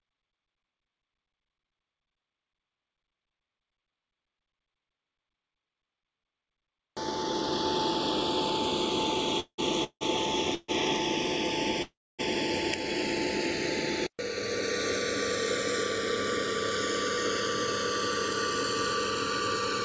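Four call audio freezes fall at 9.40–9.60 s, 9.84–10.03 s, 10.55–10.70 s and 11.82–12.21 s, likely from packets stalling until the jitter buffer emptied. Each time, the last sound is drawn out as a fading buzz or hiss and then goes silent, briefly at 10.55 s and for about a quarter second at 11.82 s. The audio then resumes where it stopped, with nothing lost, but later by 0.18, 0.17, 0.14 and 0.36 s. On a spectrogram each freeze shows as smeared horizontal streaks dying into a blank column, and all content stops at 8 kHz, which fits a G.722 call codec. The waveform shows a decaying tail and then a flat line.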